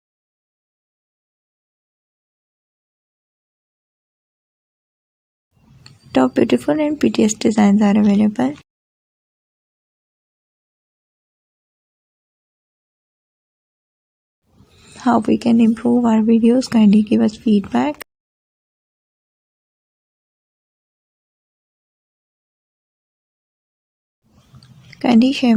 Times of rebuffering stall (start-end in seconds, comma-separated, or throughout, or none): none